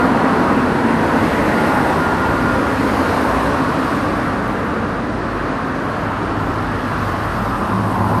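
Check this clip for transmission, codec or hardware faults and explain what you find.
One codec fault runs through the whole clip: MP2 compression is the likely cause. The sound is dull and carries a gurgling, granular distortion. Layer II coding divides the spectrum into 32 equal sub-bands. Short of bits, which fits a rate around 80 kbps, it shuts off upper bands as they flicker in and out, and it quantises the rest coarsely. That band flicker sets it apart from a fixed low-pass, which stays steadily dull.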